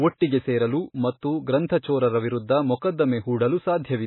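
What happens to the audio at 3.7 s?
At 3.7 s the speech has the same watery, swirly texture it has throughout, with nothing above 4 kHz. That's likely heavy MP3 compression at a very low bitrate, around 18 kbps, where the encoder drops the treble and weak frequency lines flicker from frame to frame.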